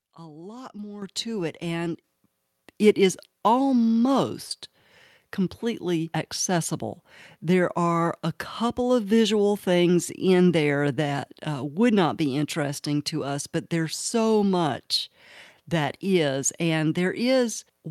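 At 1.02 s and again at 2.04 s the microphone volume stepped up, about 9 dB then about 7 dB, so voice and background jump louder together.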